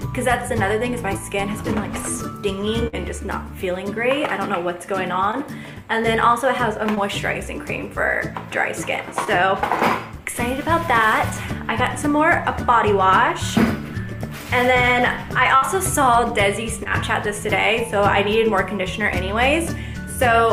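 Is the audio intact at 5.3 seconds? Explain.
No. From 5.31 to 5.35 s there is a brief smear, a wobble where the sound seems to hang on itself for an instant before settling back. This is short concealed packet loss: about 20 ms of audio never reached the decoder in time, and the receiver covered the gap by extending the preceding sound for roughly 17 ms, then cross-fading into the real signal that followed.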